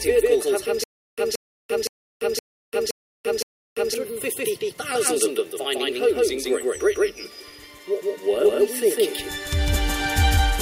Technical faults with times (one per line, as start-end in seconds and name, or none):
0.00-10.61 doubled audio track
0.84-3.94 stutter with silent gaps